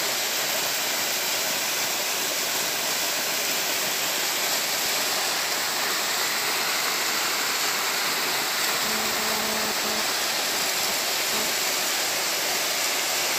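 From 8.85 s to 11.45 s a hard, raspy buzz cuts in over the sound and then stops. It sits about 9 dB below the wanted signal, is rich in harmonics above a 217 Hz fundamental, and has nothing to do with the material itself. This is GSM phone buzz: a nearby 2G phone sending data transmits in pulses 217 times a second, and the audio circuitry rectifies those radio bursts into audible interference.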